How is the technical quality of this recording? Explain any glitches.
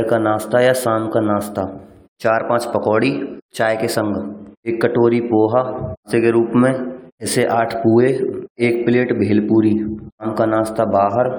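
No glitches turn up anywhere in this one, so there's nothing here to explain.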